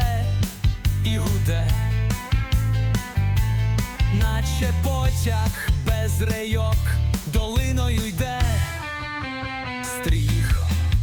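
No dropouts, clipping, glitches or other technical faults can be heard anywhere in the recording.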